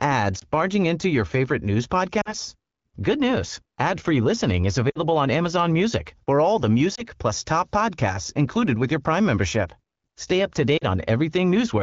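Lost AMR speech frames show up five times in this speech: at 0.39–0.45 s just before "barging into your favorite", 2.21–2.34 s, 4.90–4.98 s after "listening is", 6.95–7.05 s between "for all the" and "plus top podcasts included", and 10.77–10.84 s. Each gap sounds like one to three 20 ms frames failing. The wideband decoder papers over them by repeating its last pitch and vocal-tract settings at falling gain, so a single lost frame gives a brief dip or warble, while the longer runs drop to near silence within two frames.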